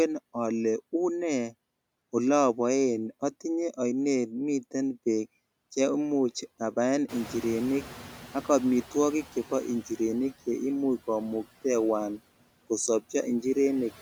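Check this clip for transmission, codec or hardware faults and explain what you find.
Two processing faults are present in this speech clip, both from the noise suppressor.

Noise suppressor artifacts run throughout. The suppressor cuts bands it judges to be steady noise by about 16 dB, frame by frame, so the background dips between phrases and swells beneath them.

Noise suppressor catching up occurs from 7.08 to 9.73 s. The room noise jumps by about 18 dB around 7 s, and the suppressor's noise estimate lags behind. At first it removes only about 8 dB, so the louder noise passes through, then sinks gradually over 2.65 s as the estimate adapts.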